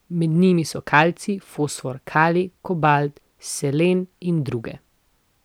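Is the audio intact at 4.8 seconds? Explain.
Yes, the speech at 4.8 seconds is intact, with no fault audible at that moment.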